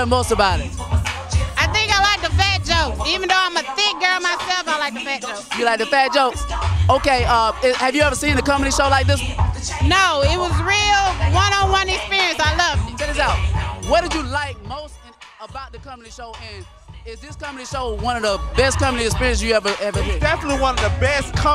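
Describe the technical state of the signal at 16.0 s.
At 16.0 s the signal is intact, with no audible fault at that moment.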